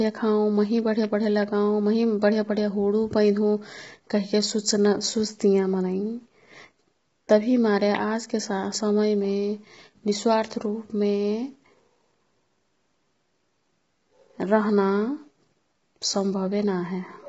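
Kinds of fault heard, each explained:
Low-delay AAC compression: The speech sounds rough and grainy throughout, with noise filling the gaps between pitch harmonics and nothing above 7.7 kHz. The damage is heavy and points to a very low bitrate, around 16 kbps, with the likely cause an AAC-ELD call codec. Its short frames blur the harmonic structure, unlike a plain low-pass filter, which dulls the top but leaves the voice clean.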